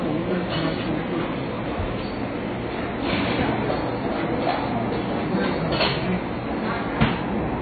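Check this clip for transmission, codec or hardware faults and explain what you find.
There is one fault, heavy AAC compression, present from start to finish. Nothing is heard above 4.5 kHz, and what remains sounds dull and smeared, with a fizzy, warbling texture. This is likely AAC-LC at a very low bitrate, about 16 kbps. The encoder lowered its cut-off. Unlike a plain low-pass filter, the surviving band also shimmers and smears, because it is coarsely quantised.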